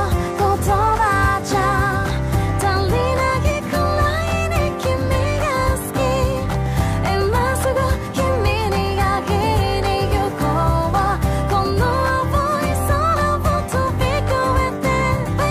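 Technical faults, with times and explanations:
No technical faults detected in the recording.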